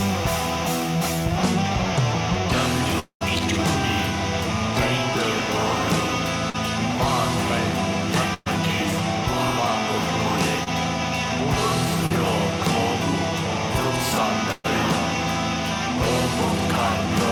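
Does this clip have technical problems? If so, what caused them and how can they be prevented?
Yes. A long network dropout from 2.99 to 3.23 s sounds like the last sound stretched into a fading buzz that sinks into quiet, likely because about 220 ms of packets never arrived. On a spectrogram, smeared, flattened bands fade into a near-empty gap. A wired connection or a less congested network would prevent it.

Short concealed packet loss at 6.50 to 6.56 s, 10.64 to 10.68 s and 12.06 to 12.12 s causes brief smears where 20 to 40 ms went missing and were patched over. On a spectrogram they appear as blurred vertical slivers. A modest jitter buffer and forward error correction would reduce these.

A burst of packet loss at 8.34 to 8.48 s and 14.52 to 14.66 s replaces about 120 ms each time with a held, dimming continuation. On the waveform the envelope visibly tapers before the audio resumes. 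Redundant packet encoding and steadier bandwidth would prevent these.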